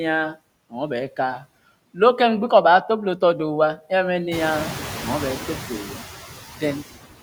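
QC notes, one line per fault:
throughout: noise suppressor artifacts. Steady noise is pulled down about 15 dB between phrases and returns under speech, so the floor pumps. The spectrogram shows a patchy, flickering floor and near-empty gaps, more so after the room noise rises around 4.5 s.
5.84–5.99 s: speech cut by the noise suppressor. Quiet speech was treated as noise and lowered up to about 8 dB for roughly a tenth of a second, sounding swallowed. The waveform dips and the spectrogram shows a faint, thinned patch.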